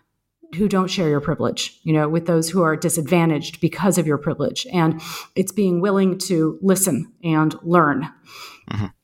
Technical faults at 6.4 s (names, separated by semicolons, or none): none